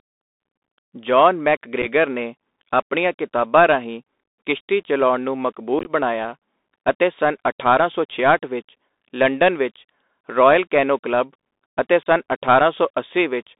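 The speech runs through a Bluetooth CVSD headset codec, a 64 kbps one-bit delta coder whose line passes only about 250 Hz to 3.7 kHz. Its adapting step can't keep pace with loud bright sounds, so sibilants turn scratchy, peaks distort, and a granular hiss sits underneath throughout.

Unconcealed Bluetooth headset packet loss drops voice packets, leaving bare gaps. At 1.82 to 1.86 s, just before "ਨੇ ਆਪਣੀਆਂ ਕਿਤਾਬਾਂ ਰਾਹੀਂ", a handful of packets vanish, with 18.8 ms lost across 37.5 ms. From 5.79 to 5.91 s, after "ਰਾਹੀਂ ਕਿਸ਼ਤੀ ਚਲਾਉਣ ਨੂੰ", around ten packets go, 45 ms over 67.5 ms, and the longest hole is 18.8 ms. At 12.03 s, after "ਰਾਇਲ ਕੈਨੋ ਕਲੱਬ ਅਤੇ", 30 ms drops out. Each leaves short holes with abrupt edges, and the voice comes back quieter for a moment.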